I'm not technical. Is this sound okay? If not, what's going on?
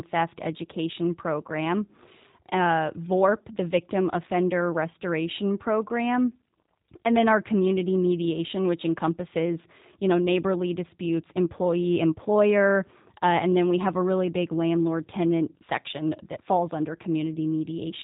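No. G.729 codec damage runs through the whole clip. This phone-call compression rebuilds speech from a rough model of the vocal tract, so the voice sounds slightly rough and synthetic, and everything above about 3.8 kHz is gone, making it dull and muffled.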